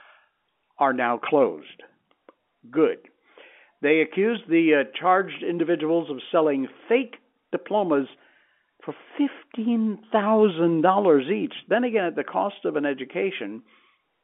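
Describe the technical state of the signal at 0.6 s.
At 0.6 s the audio is intact, with nothing more than the narrow telephone band and faint level-following hiss of G.711 coding that carries the whole call.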